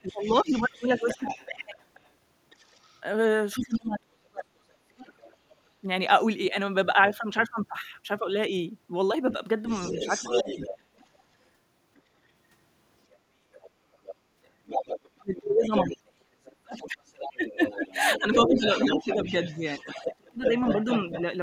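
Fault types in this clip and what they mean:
speech suppressed in double talk: When both ends talked at once, the echo canceller likely could not tell the local talker apart from the loudspeaker echo and pulled the whole microphone signal down. The speech dips and breaks up in pieces from 0.03 to 1.62 s (around 10 dB, roughly 0.4 s in all), 3.54 to 5.84 s (around 35 dB), 9.93 to 10.56 s (briefly, about 15 dB) and 15.17 to 20.8 s (around 30 dB, roughly two seconds altogether).
other side's voice leaking through: A second voice, most likely the far end playing from the talker's own loudspeaker and not fully cancelled, sits underneath the main speech. It runs from 0.03 to 5.35 s at roughly 20 dB below the talker, returns from 9.31 to 12.01 s at roughly 10 dB down, and grows strongest from 13.53 to 21.22 s, only about 5 dB beneath the talker.
background gated by the echo canceller: During loudspeaker playback the echo canceller clamped the microphone gain hard, briefly choking off the room sound rather than just the echo. 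At 13.18 to 13.4 s the background drops by about 8 dB for roughly a fifth of a second, a short hole in the ambience that closes again as the canceller releases, just before the strongest stretch of leaked far-end voice begins.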